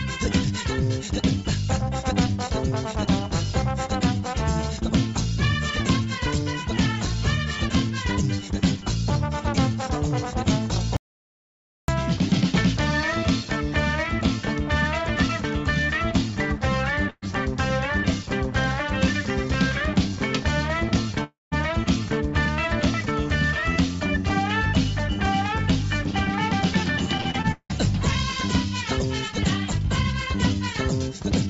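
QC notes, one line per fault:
10.97–11.88 s, audio dropout to silence: the sound stops dead mid-flow for about 0.92 s, then resumes abruptly. This is likely a lost input with silence written in its place. The waveform is a flat line, and the spectrogram shows a blank column with no room tone.
17.10–17.24 s, burst of packet loss: about 120 ms of audio is missing. The receiver extends the last sound over 120 ms as a fading buzz or hiss, ending in 30 ms of silence. On the spectrogram, the frozen last sound tapers away before the audio jumps ahead.
21.24–21.53 s, long network dropout: about 280 ms of audio never arrives, likely from a network stall. Concealment smears the last sound over 276 ms, decaying so that the last 180 ms of it is silence. The spectrogram shows stretched, fading bands that end in an empty gap below the 8 kHz ceiling of the G.722 call path.
27.17–27.71 s, repeated packet loss (robotic sound): five separate gaps, the longest 178 ms, leave 52% of this span patched and 280 ms missing. 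The result is choppy. The waveform shows repeated fragments, and the spectrogram shows a striped pattern of smeared, repeated frames.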